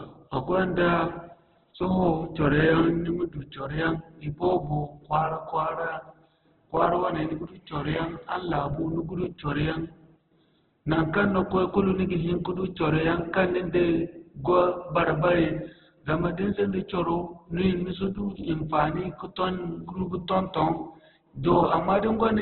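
From start to end, the speech carries heavy codec damage, likely from Opus compression. Nothing is heard above 4.2 kHz, so the sound is narrowband. The bit budget is very low, which fits a rate near 8 kbps. In its music mode, the encoder keeps each band's energy but fills starved bands with folded or noise content. Tones lose their clean edges. The speech turns noisy, rough and grainy throughout.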